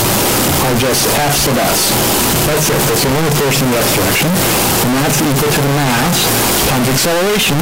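The audio has a float read as integer fault from start to finish. The waveform sits at an almost fixed, high level as a nearly square signal. It is very loud and harsh, and background noise is as loud as the main sound. The likely cause is 32-bit float samples read as 32-bit integers, so sign and exponent bits set each value.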